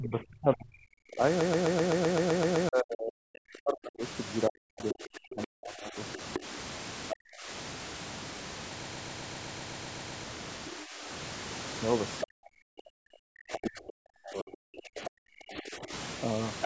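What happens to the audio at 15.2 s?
At 15.2 s the speech is pulled far down, dipping by up to about 40 dB in places, as part of a stretch of speech suppressed in double talk running from 12.23 to 15.92 s. The likely cause is the echo canceller, unable to tell the talker from loudspeaker echo while both sides spoke, turning everything down. Just before, from 14.97 to 15.1 s, a brief scrap of the other side's voice leaking through can be heard, well below the talker's level. This is likely residual loudspeaker echo the canceller failed to remove from the microphone signal.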